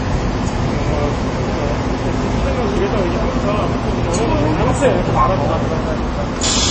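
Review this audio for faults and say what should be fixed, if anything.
MP3 compression, throughout the clip: the sound carries plainly audible codec damage, with nothing above 8.3 kHz. The encoder likely ran short of bits, cut the treble at that fixed point, and zeroed weaker frequency lines, which fits a low bitrate around 32 kbps. To prevent it, keep an uncompressed master or encode at a much higher bitrate.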